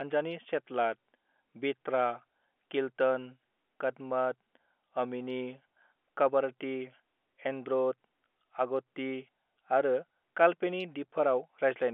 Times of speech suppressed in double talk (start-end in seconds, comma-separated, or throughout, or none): none